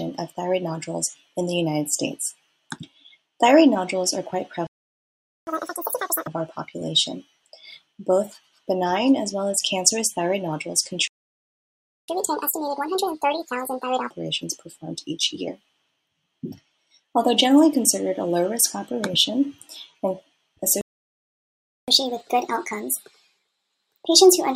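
At 4.67, 11.08 and 20.81 s the sound cuts to silence for 0.80, 1.01 and 1.07 s. These are playback stalls, likely from the player running dry of data or its thread being blocked.

Each gap is followed by catch-up at higher speed, where the player resamples its backlog to regain lost time, raising speed and pitch together:

From 5.47 to 6.27 s at 2x, about 10 semitones up.
From 12.08 to 14.10 s at 1.5x, about 7 semitones up.
From 21.88 s to the end at 1.25x, about 4 semitones up.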